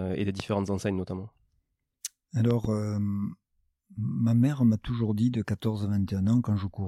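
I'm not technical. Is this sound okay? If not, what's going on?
No. There's a loud pop at 0.40 s and a quick double pop from 2.51 to 2.67 s, with the speech carrying on underneath, likely from a plug, switch or static jolt.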